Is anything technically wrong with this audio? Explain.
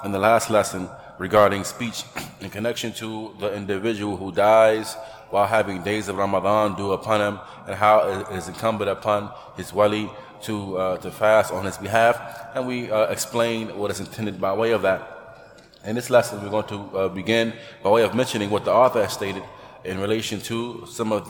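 No, nothing technically wrong can be heard in this audio. The sound carries on steadily with no disturbance at any point.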